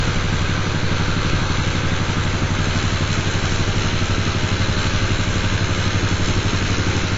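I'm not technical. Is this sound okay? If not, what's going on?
No. The audio was likely squeezed hard by AAC compression, which throws away detail to save space. From start to finish, nothing above 7.6 kHz survives, so the sound is dull and muffled, with a smeared, warbling texture that is plainly audible.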